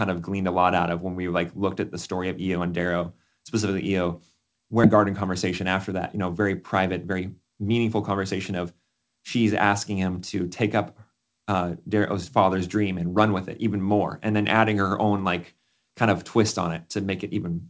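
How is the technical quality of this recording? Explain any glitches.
The recording has two clear glitches close together, both from the call path.

A skip ahead happens at 4.84 to 4.86 s. About a second of audio is simply gone. Nothing fills the hole. Later audio was already queued, so the stretch was dropped and playback jumped forward. The two sides are butted together almost directly. You hear an abrupt lurch in the sound, as if a piece was cut out with scissors.

A jitter buffer speed-up follows from 4.97 to 8.12 s. The buffer was still holding more audio than it wanted. To shrink the delay it trimmed tiny pitch-period slices, over and over. In total about 0.4 s was removed. Playback runs at about 112% speed, yet the pitch stays the same. The speech sounds rushed for those three seconds.

The call codec passes nothing above 8 kHz, which fits a G.722 wideband link.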